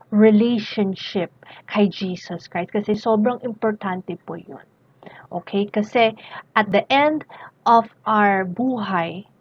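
The audio drops out twice, at 2.94 s and 6.72 s, each time as a block of digital silence. The first gap is about 1.5 ms long, which fits a 64-sample buffer, and the second about 1.8 ms. At these lengths each dropout is heard as a single tick, not a hole. The signal drops to silence and back with no fade. This points to output buffers not being filled in time.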